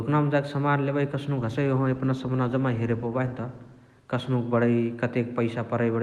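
From 1.37 s to the end, a call bitrate drop starves the encoder, consistent with roughly 64 falling to 17 kbps. Highs above 12 kHz vanish and the speech turns coarse and watery.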